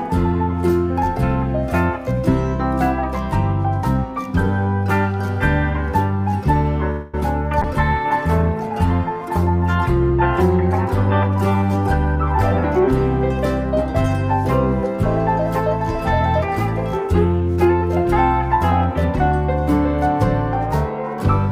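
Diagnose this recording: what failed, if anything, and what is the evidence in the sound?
At 6.90 to 7.15 s the sound stalls: the last moment is stretched into a fading buzz for about 0.23 s, then resumes exactly where it left off with nothing lost. This is a call audio freeze at the network stage, likely delayed packets draining the jitter buffer so the receiver extended the final sound until delivery resumed.

Right after, at 7.21 to 7.23 s, there is a tiny smear lasting 10 ms. That is short concealed packet loss: a sliver of audio missed the decoder, and the receiver synthesised a continuation of the preceding sound, then crossfaded back into real data.

From 7.62 to 14.20 s the audio turns rough, watery and dull as the call bitrate drop takes the encoder from 96 to 25 kbps, staying at the floor for about 4.9 s. A falling bandwidth estimate forced Opus into coarser coding with trimmed high frequencies.

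At 11.34 to 12.87 s and 17.05 to 17.91 s the sound hurries without changing pitch, running at 106% and then 111%. This is jitter buffer speed-up in playout: each time roughly a tenth of a second was shaved off in pitch-period slices to reduce excess buffered delay.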